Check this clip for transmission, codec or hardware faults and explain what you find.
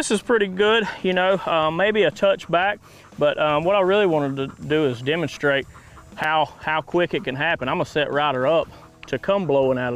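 There's one fault here. At 6.24 s there's a block of digital silence, a 5 ms run of zeros where the output wasn't filled in time or a calculation went bad, so the audio drops out with a tick or dip.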